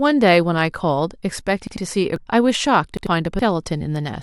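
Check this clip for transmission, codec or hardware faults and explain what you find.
Two kinds of fault occur, each twice: a repeated buffer and damaged data in a compressed stream.

From 1.67 to 1.77 s and again from 2.97 to 3.07 s, a repeated buffer is audible. New audio arrived late, so the playback device replayed its last 93 ms block once, which fits a 4096-sample buffer. The speech stutters with a hard join, and about a tenth of a second of audio is lost each time.

At 2.16 s and 3.39 s there is damaged data in the compressed stream. Corrupted bytes cause the decoder to misread frames and lose sync until it finds a valid header, producing a brief chirp, squawk, click or short hole in the speech.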